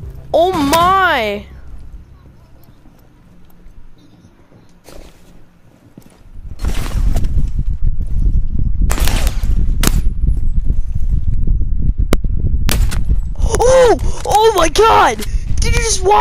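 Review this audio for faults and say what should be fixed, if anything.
Violent cracks, much harsher than clipping, hit at 0.73–0.75, 8.92–9.27, 9.84–9.88, 12.13, 12.69–12.72, 13.55–13.62, 14.32–14.58 and 15.77 s. This is integer overflow: loud peaks pushed up to about 2 dB past the integer limit wrap to the opposite sign instead of being held at the limit. To prevent it, use saturating arithmetic or leave enough headroom before the gain or summing stage.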